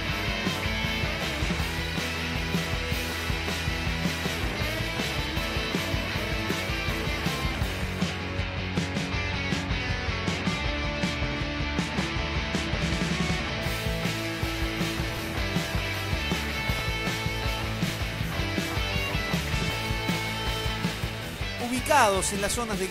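Chunks out of order: a 21.33 ms block of audio played three blocks late at 15.10 to 15.19 s and 16.73 to 16.81 s, and one block late at 17.86 to 17.90 s. Each displaced stretch sounds like a brief jumbled stutter, with hard joins where the order breaks.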